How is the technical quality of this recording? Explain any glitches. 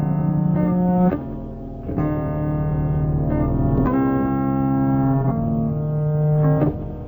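The recording is technically faulty. Throughout, there is a stereo read as mono fault: interleaved left and right samples played as one channel, so the music runs at half speed, an octave low, with a faint mirrored image high in the spectrum.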